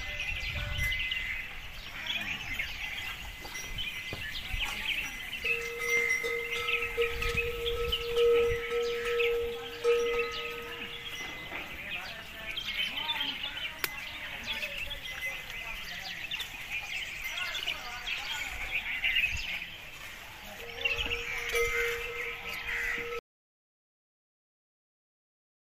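An audio dropout to silence hits at 23.19 s and lasts to the end, about 2.5 s. The sound stops abruptly into silence with no room tone, unlike a fade-out or gate, most likely from a lost input signal while recording continued.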